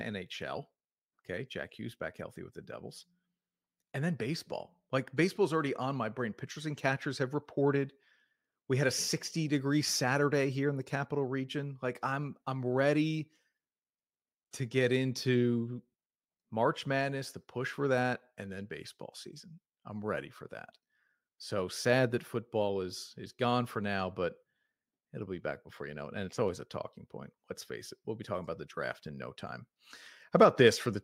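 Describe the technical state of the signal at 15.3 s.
Nothing goes wrong in the signal at 15.3 s; the speech there is intact.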